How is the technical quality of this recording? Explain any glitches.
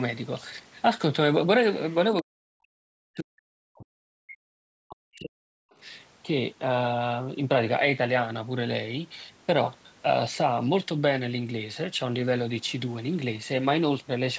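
The recording has two related echo-control glitches close together near the start.

From 1.91 to 1.95 s, a brief scrap of the other side's voice leaking through appears, very faint, roughly 30 dB under the speech. It is likely residual loudspeaker echo the canceller missed. On a spectrogram it shows as a thin, short smear of extra harmonic energy.

From 2.22 to 5.72 s, the talker's speech is suppressed in double talk, with around 3 seconds affected in pieces and the deepest dips reaching roughly 40 dB. Overlapping speech likely confused the echo canceller into attenuating everything. The waveform shows sudden envelope collapses, and the spectrogram shows gaps and lost upper bands.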